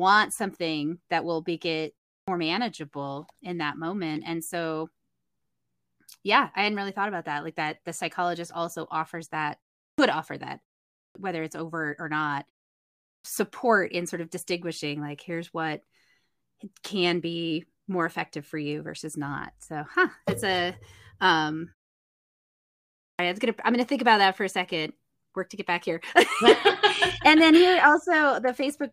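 Clipped start after a pause at 2.2, 9.91, 11.08, 13.17 and 23.11 s: after silences of 0.3 to 1.45 s, the sleeping output device swallows about 72 to 81 ms, so speech starts abruptly.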